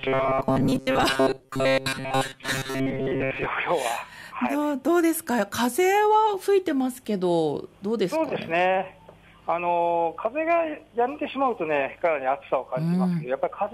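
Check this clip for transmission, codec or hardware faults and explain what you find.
One fault. From 0.01 to 3.46 s, robotic sound from repeated short buffers: audio likely arrived too seldom, so a roughly 7.5 ms buffer was replayed most of the time, imposing a rigid, metallic 133 Hz buzz.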